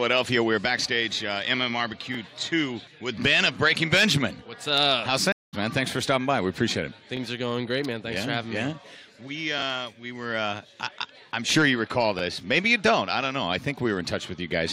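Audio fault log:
2.15 s, 7.17 s, 12.19 s: overlapping chunks. At each join, about 23 ms of sound plays twice because each new block begins slightly before the previous one finished. The joins fall about 5 s apart, so the repeat sounds like a regular small stutter or click.
5.32–5.54 s: stream reconnect. The audio drops out for about 205 ms while the connection is lost and restored, then a fresh decoder picks up about 0.15 s further along. The result is a gap followed by a small jump forward, with the first moments muted or fading in.
9.58–9.62 s, 11.50–11.54 s: chunks out of order. In each case a 20 ms block arrives one block late and plays after the block that should follow it. Nothing is missing, but the swapped order creates three hard joins, so each spot sounds like a brief jumbled moment.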